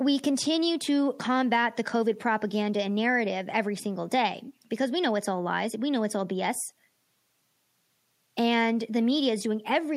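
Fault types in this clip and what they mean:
No technical faults are audible anywhere in this speech recording.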